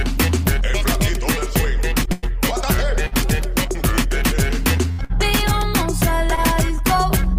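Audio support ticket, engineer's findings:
Burst of packet loss at 2.12 to 2.26 s, 4.92 to 5.01 s and 5.04 to 5.12 s. Receiver concealment holds the last sound as a decaying buzz or hiss, then skips ahead. About 60 ms of audio lost each time. Unlike a stall, sound does not resume where it stopped.

Short stall from a late packet at 3.07 to 3.15 s (about 48 ms) and 6.35 to 6.40 s (about 21 ms). Jitter buffer underrun, so the last sound is stretched with a slight buzz or dip. Nothing is lost, and playback resumes at the same point.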